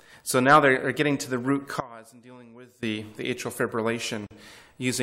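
From 1.80 s to 2.83 s the sound collapses by about 22 dB, leaving only a faint residue before full level returns. The likely cause is one channel inverted: with one side of the stereo pair at reversed polarity, everything common to both channels cancels when they are summed to mono, so centred material and low end almost disappear and only the small difference between left and right survives.

At 4.27 s there is a gap at a join of encoded pieces: a hole of about 42 ms opens in continuous sound, with abrupt edges slightly smeared by the codec, and the audio resumes exactly where it left off. The pieces were encoded separately and concatenated without trimming the encoder's start-up delay and end-of-stream padding. Joins recur every 6.0 s, which points to pieces of that length.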